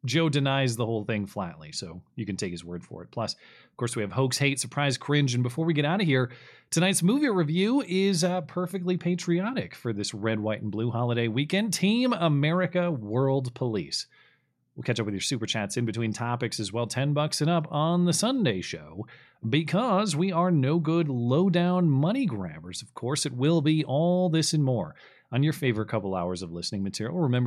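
Speech recording, no technical faults detected on listening.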